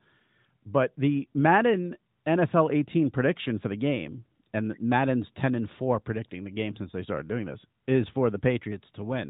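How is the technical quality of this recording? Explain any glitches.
No glitches can be heard anywhere in the recording. The speech has passed through the AMR narrowband mobile codec, so nothing above 4 kHz is present and there is a light coded texture, which fits its 12.2 kbps mode.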